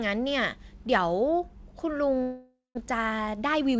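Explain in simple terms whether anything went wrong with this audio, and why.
Yes, two things went wrong. From 2.22 to 2.79 s there is a long network dropout, likely caused by audio packets failing to arrive. The receiver stretched the last sound into a fading buzz, then left about 0.17 s of silence. Roughly 0.4 s of the original speech never returned.

From 2.87 to 3.76 s comes a jitter buffer speed-up. After the gap, delayed audio piled up, so the receiver repeatedly trimmed tiny slices, about a tenth of a second in total. The speech plays about 9% faster at unchanged pitch and sounds hurried.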